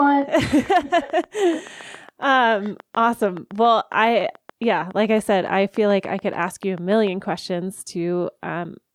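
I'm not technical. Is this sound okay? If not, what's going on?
No. There's a train of clicks from 0.07 s to 7.08 s: a steady ticking, about seven clicks every second, evenly spaced, around fifty in all. Each click is roughly as loud as the speech, so it's easy to hear, including in the gaps between speech. Something is likely adding a short pulse over and over, such as electrical interference from nearby equipment or a faulty connection or power supply.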